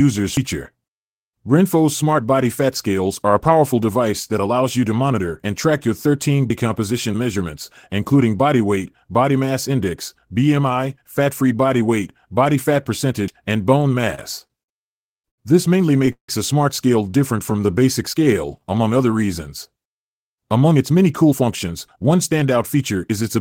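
Speech recording with three skip-ahead jumps at 0.37, 6.50 and 13.28 s, each a jump in the sound with no silence, likely dropped buffers (overrun) where unread audio was overwritten. Roughly a tenth, a fifth and a tenth of a second vanish, and the two sides butt together. That missing material distinguishes them from the concealment faults that follow. From 14.01 to 15.39 s the audio drags through repeated stalls (stutter). Nine separate hold-ups, the longest 91 ms, are bridged by continuing the preceding sound, 247 ms in all. Nothing is lost, but the flow keeps catching. These many short hiccups differ from the single longer break that comes next. At 16.12 to 16.29 s comes one call audio freeze: a 159 ms hold where the last sound trails off and then sits about 90 ms in silence. The speech then resumes exactly where it stopped, so a gap is inserted rather than anything skipped. This was likely an empty jitter buffer. 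Between 17.37 and 18.66 s a jitter buffer slow-down stretches the speech to about 91% speed by repeating pitch periods, adding 126 ms. Sounds are drawn out at unchanged pitch, with no gap or click. From 20.47 to 23.36 s the opposite occurs. A jitter buffer speed-up trims pitch periods to run at 107%, removing roughly a fifth of a second, and the speech sounds hurried at normal pitch.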